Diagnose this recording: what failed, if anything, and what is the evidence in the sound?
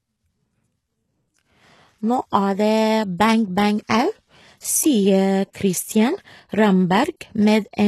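The codec stage is at fault throughout. The speech has plainly audible coding damage, with nothing above 12.3 kHz and treble that sounds synthetic rather than captured. This is likely HE-AAC compression, rebuilding the top band from copied lower bands, at a bitrate that sounds around 16 kbps.

There is pre-echo at 5.53 s, also from the codec. A short hiss spreads about 17 ms ahead of a sharp onset, softening its attack. The quantisation noise sized for the loud transient has been smeared across the whole transform block, including the quiet moment before it.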